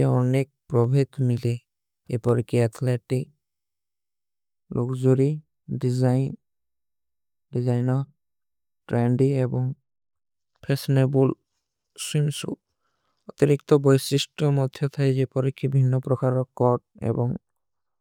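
At 0.84 s and again at 2.29 s the speech carries a single sharp click, each showing as a thin vertical line across the spectrum. These are most likely dropped samples: a fraction of a millisecond of the stream goes missing, so the waveform jumps straight to a later value. Unlike a dropout, no sound is audibly removed and there is no gap or muffled stretch, just an instantaneous tick.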